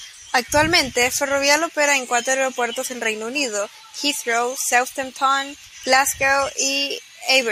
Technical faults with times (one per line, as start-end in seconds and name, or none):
none